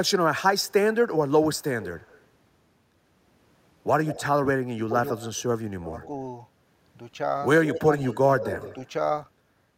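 From 0.59 to 2.21 s a faint delayed copy of the speech trails the original by about 150 ms, roughly 20 dB down. This echo leak is likely a far-end speakerphone whose echo canceller let some loudspeaker pickup escape. Shorter scraps return at 4.06–4.24 s (about 15 dB down), 5.20–5.42 s and 6.01–6.07 s (both about 25 dB down). The steady 149–160 ms lag sets it apart from room reverberation, which smears rather than repeats.

At 4.74–4.95 s and 5.81–5.95 s the talker dips by up to about 15 dB as the other side speaks: speech suppressed in double talk, likely with the canceller turning down the near voice along with the echo. From 7.66 to 8.89 s the strongest echo, about 10 dB down, overlaps further chopping between 7.74 and 8.60 s, adding up to around 0.3 s. These dips coincide with the other talker, unlike dropouts from packet loss.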